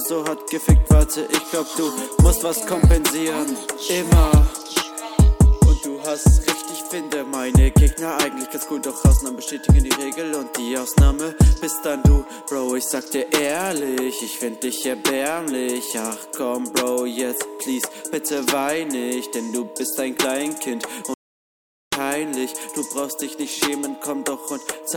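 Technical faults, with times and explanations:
21.14–21.92 s, audio dropout to silence: the sound cuts to silence for about 0.78 s, no room tone, likely a brief input loss while recording continued.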